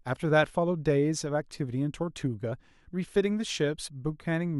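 At 2.51 s the speech is broken by a brief blip from damaged data in a compressed stream. A stretch of the encoded data is corrupt, so the decoder misreads or rejects those frames, loses sync and has to find the next valid frame header before normal decoding resumes. A plain dropout would give a short silence, and a click would give a single clean spike.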